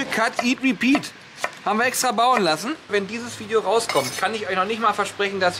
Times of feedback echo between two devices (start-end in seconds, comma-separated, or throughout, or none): none